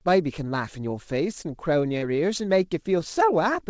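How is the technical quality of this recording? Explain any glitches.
One glitch stands out in the speech, heard through a call codec whose band stops at 8 kHz, which fits G.722 at about 64 kbps. From 1.98 to 2.04 s there is a brief smear, where the sound stretches and wobbles for an instant. That is short concealed packet loss: roughly 40 ms of audio arrived too late, so the receiver continued the preceding sound to fill the gap before blending back into the real signal.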